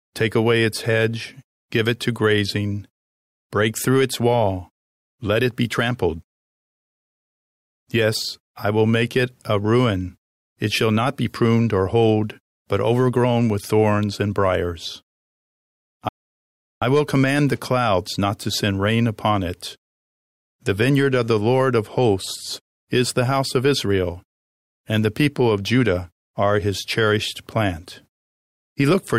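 A playback stall interrupts this speech clip from 16.09 s to 16.82 s: the audio stops mid-flow and the output sits silent for about 0.73 s, then resumes with "will command the clouds". The gap is most likely the player running short of buffered data, or its playback thread being blocked, so nothing reached the output until it recovered.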